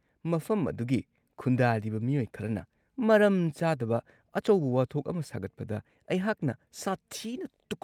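Speech with no audible faults.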